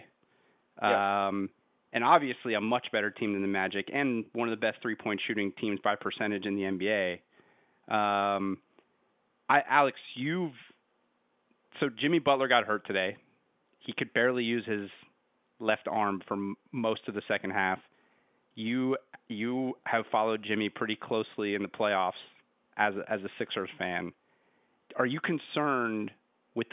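No faults are audible anywhere in this speech recording.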